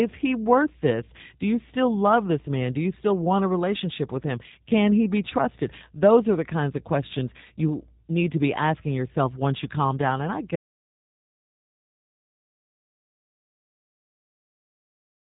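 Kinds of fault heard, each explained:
G.729 codec: The whole clip runs through this 8 kbit/s VoIP codec, which rebuilds speech from a vocal-tract model plus a handful of pulses per frame. Nothing above 3.8 kHz gets through, and the synthetic, slightly gritty texture is plainly audible throughout.
Audio dropout to silence: At 10.56 s the speech cuts out and stays dead silent right to the end, with no room tone at all. That silence points to the input likely being lost, say a disconnect or mute, while recording continued.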